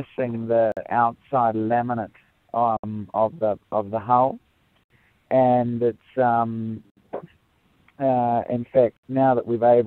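Brief silences cut the sound at 0.72, 2.77, 4.84, 6.90 and 8.97 s, 48 ms then 67 ms each. These are gaps at joins of encoded pieces: separately encoded two-second segments were joined with their start delay and end padding left in.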